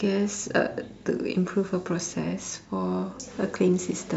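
Listening to this speech recording, nothing stood out as a technical problem at any point.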